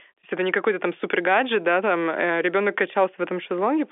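Nothing here needs flagging: the speech comes through as ordinary G.711 telephone audio, with the familiar narrow phone-line band topping out around 3.7 kHz and at most a faint trace of coding noise.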